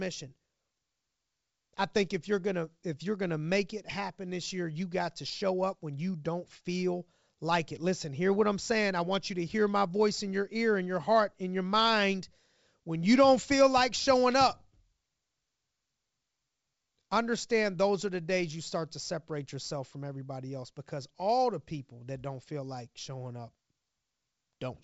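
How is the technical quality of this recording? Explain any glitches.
Listening through the recording, nothing stood out as a glitch or technical problem, with the speech carried over G.722 wideband telephone coding at 64 kbit/s.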